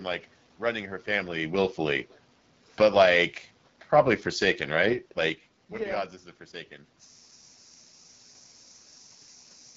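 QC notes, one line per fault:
throughout, AMR wideband (HD Voice) codec: The speech has been squeezed through AMR-WB at one of its two lowest rates, which fits about 8.85 kbit/s. At that rate the pulse-driven vocal tract model has too few bits to track the voice, so the speech comes out rough and raspy, and the damage is plainly audible. The band above 6.4 kHz is filled with shaped noise.
2.66 to 3.14 s, automatic gain falling: The automatic gain control judged the input too loud, or its background noise too strong, and pulled its gain down over about half a second, by about 5 dB in total. The speech sinks gradually across that span, and the room noise beneath it drops with it. That shared drop is what marks it as a gain change in the system rather than the talker shifting position, as happens near 1 s and 5 s.
7.08 to 9.77 s, system hang loop: The computer or audio driver froze while the sound hardware kept replaying the same ring buffer. 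That buffer is 21.33 ms long, which fits a 1024-sample buffer. A single fragment of audio repeats exactly, over a hundred times, until the clip ends. The speech is gone and a steady mechanical buzz at 46.9 Hz replaces it. The buzz comes from the identical slice returning at that rate, not from anything in the room.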